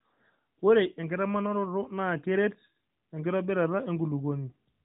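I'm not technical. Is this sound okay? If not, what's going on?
Yes, there are no faults, just the narrow phone-line sound of the AMR narrowband mobile codec, which passes nothing above 4 kHz.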